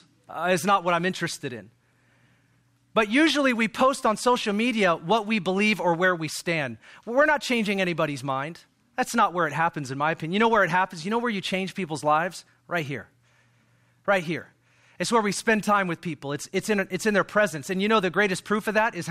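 No technical faults can be heard anywhere in the speech.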